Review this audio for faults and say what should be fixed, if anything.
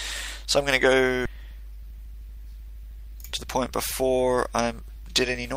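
At 1.25 to 1.27 s there is a skip ahead. About a second of audio is simply missing. Nothing fills the hole. The sound before and after is butted together almost directly, so playback lurches forward. This happens when a run of audio is lost in transit, or thrown away by an overfull jitter buffer while newer audio already waits. To prevent it, size the jitter buffer to absorb packet bursts and conceal or smooth losses rather than discarding them outright.

From 1.36 s to 5.45 s the jitter buffer speed-up takes over. Playback runs at about 106 percent of normal speed. Pitch stays the same. The receiver is trimming tiny slices, one or a few pitch periods at a time, again and again. Around a fifth of a second is shaved off this way. The result sounds slightly rushed. The buffer was holding more than its target after delayed audio arrived in a clump. To prevent it, let the buffer drain more gently, spreading the catch-up over a longer stretch or during quiet passages.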